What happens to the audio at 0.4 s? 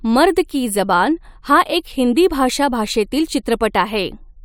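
Nothing goes wrong at 0.4 s; the speech there plays through intact, with no dropout, glitch or distortion.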